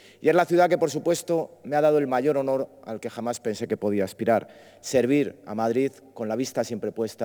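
Sample clock jitter runs through the whole clip. The converter's sampling instants wander by something around 5 microseconds, so each sample is captured slightly off its proper moment. Where the waveform changes quickly, that timing error becomes an amplitude error, leaving a noise floor roughly 30 dB below the signal. It comes across as a grainy hiss that thickens on loud, bright passages and drops away when the sound goes quiet.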